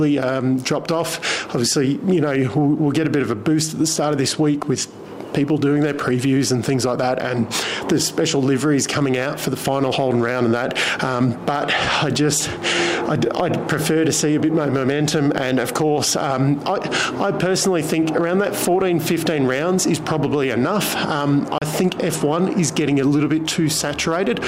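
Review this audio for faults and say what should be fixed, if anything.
There's one digital broadcast dropout, from 21.58 to 21.62 s. The sound fades out in about 3 ms and goes silent for roughly 32 ms before coming back, which fits a single frame failing its check while the receiver mutes until a clean frame arrives. Whatever was sent in that gap is simply gone, so there's nothing to recover from the clip itself. The fix is re-capturing that stretch from a clean source. To prevent it, improve reception margin with better antenna placement or signal strength, or record from a wired or stream feed instead of over the air.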